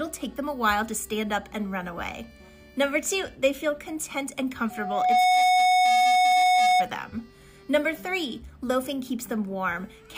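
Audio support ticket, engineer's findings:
Loudspeaker feedback squeal, 4.70–6.90 s. Single 732 Hz tone swells over roughly half a second to about 10 dB above programme. Mic-to-speaker loop gain above unity at that frequency. Spectrogram: one bright horizontal line, thickening; waveform: growing sinusoidal envelope.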